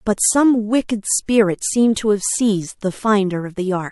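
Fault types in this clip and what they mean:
pre-echo: a short hiss, about 14 to 16 dB up, smears 19 to 25 ms ahead of two sharp attacks, likely from long transform blocks spreading quantisation noise.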